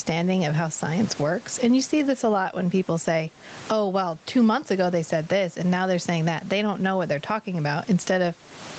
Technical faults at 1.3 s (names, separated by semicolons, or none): gain pumping